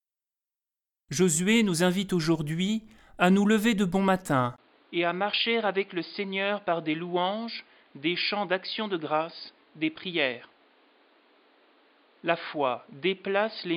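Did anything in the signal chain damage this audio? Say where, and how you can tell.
Yes. At 4.56 s, just after "lever de bon matin", a brief gap of about 20 ms appears. From there to the end, the speech has nothing above 4.9 kHz, sits a few dB quieter, and carries a new faint noise floor. This is likely an input switched to a poorer device at the driver level.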